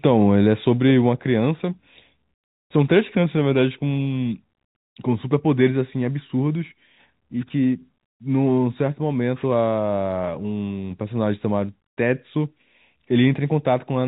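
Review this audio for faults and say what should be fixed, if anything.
No faults found; nothing here needs fixing.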